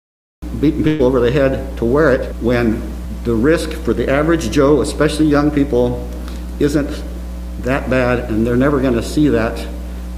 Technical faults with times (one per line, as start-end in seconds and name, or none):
0.00-0.42 cut-off start
0.87-1.02 burst of packet loss